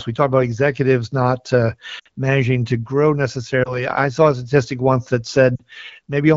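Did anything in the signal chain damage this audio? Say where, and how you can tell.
Yes. Brief warbles and smeared dips at 1.99–2.08 s, 3.63–3.87 s and 5.56–5.62 s are lost AMR speech frames over the radio link, which the decoder concealed with repeated, fading parameters.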